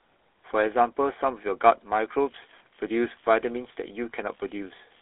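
From the start, the speech has been through the GSM full-rate codec. The encoder models the vocal tract and rebuilds the excitation from a sparse, regularly spaced pulse train, discarding much of the fine detail in the speech. Throughout, the result is a plainly audible buzzy, gravelly roughness on every voiced stretch. The sound sits in a narrow telephone band of 300 Hz to 3.6 kHz, and the low-rate coding fits 13 kbps.

From 2.24 s to the end, computer activity noise appears. Changing processor or peripheral load is disturbing the shared ground that the audio circuitry rides on. That electrical disturbance leaks into the recording as a buzzy, chirping rasp pulsing at around 70 Hz. It sits well below the speech, at roughly 35 dB down, and it follows the machine's activity rather than anything in the speech.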